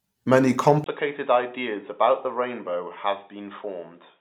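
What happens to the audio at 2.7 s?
Input switched to a poorer device from 0.84 s onward, likely a change of microphone, so the speech loses everything above 3.8 kHz, sounding duller, quieter and slightly noisier.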